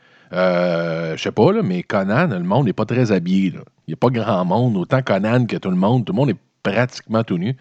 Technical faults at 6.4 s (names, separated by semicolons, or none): none